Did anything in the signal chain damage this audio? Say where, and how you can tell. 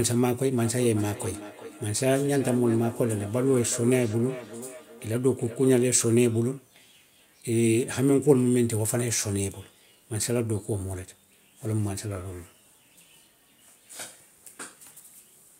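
Yes. From 0.64 to 5.96 s the speech comes back as a delayed copy roughly every 0.4 s, peaking about 14 dB below the direct speech. This is feedback echo between two devices, and the fault sits in call processing. A second device in the room on the same call plays this talker's audio, and the microphone picks it up and resends it. The local echo canceller only subtracts its own device's playback, so it never removes this copy.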